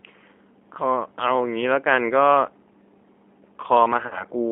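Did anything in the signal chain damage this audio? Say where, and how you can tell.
Yes, at the codec stage. The speech sounds rough and slightly synthetic throughout, and it sits in a narrow band from about 250 Hz to 3.4 kHz with nothing above. That's the G.729 codec at 8 kbit/s rebuilding the voice from a vocal-tract filter, a pitch predictor and a few pulses per frame, and the damage is plainly audible.

There's also a problem at the network stage. At 4.07 s the speech smears into a fading, stretched sound and stays weak and distorted until about 4.24 s. That's VoIP packet loss concealed by the speech codec. About 40 ms went missing, which fits two lost packets. The decoder stretched its last pitch and filter with falling gain and then needed a little while to recover once packets came back.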